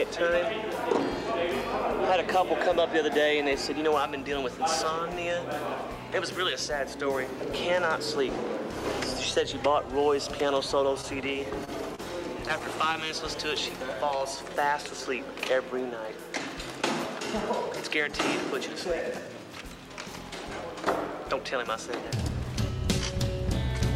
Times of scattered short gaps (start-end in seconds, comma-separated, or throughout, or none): 12.48-13.11